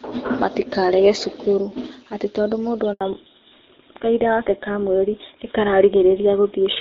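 Speech on a phone call, carrying the light coding texture of HD Voice at first, which fits AMR-WB at 12.65 kbit/s, until a handover gap at 2.93 to 3.01 s, just after "cukuru atĩ tondũ mũndũ". For 80 ms the voice falls silent while the call switches networks. Unlike packet-loss concealment, nothing is patched or smeared, and the sound after the gap does not return to its earlier quality. From 3.01 s to the end comes a fallback to narrowband: everything above 4 kHz is gone and the voice turns duller and rougher, which fits GSM full rate at 13 kbit/s. A simple low-pass filter would only dull the sound. Here the cut-off lands exactly at the handover and brings the older codec's grit with it.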